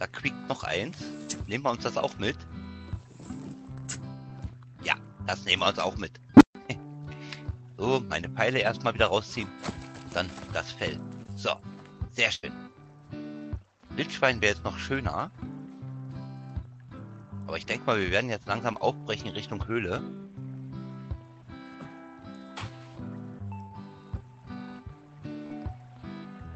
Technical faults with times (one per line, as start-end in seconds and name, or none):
1.23-1.37 short concealed packet loss
6.37-6.55 unstable filter
11.23-11.27 short concealed packet loss
12.35-12.45 burst of packet loss
18.73-18.76 short concealed packet loss
23.68-23.72 short concealed packet loss
25.46-25.51 short concealed packet loss